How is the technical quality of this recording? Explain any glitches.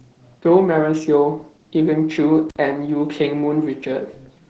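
The recording is limited by plainly audible voice compression throughout, plus one brief dropout.

Opus voice compression runs through the whole clip. The encoder works in its SILK speech mode, at a rate that sounds like roughly 12 kbps. It discards everything above about 9.2 kHz and codes the speech excitation coarsely. The result is plainly audible damage: the speech sounds muffled, slightly hoarse and faintly robotic.

An intermittent contact occurs from 2.49 to 2.56 s. A loose plug or cable opens briefly, and the signal disappears for about 55 ms. Crackle marks both edges of the gap, and faint hiss remains while the line is broken.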